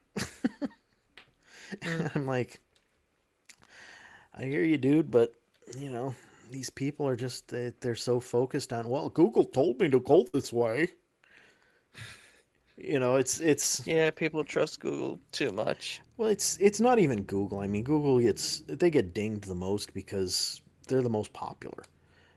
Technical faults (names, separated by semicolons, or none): burst of packet loss; short concealed packet loss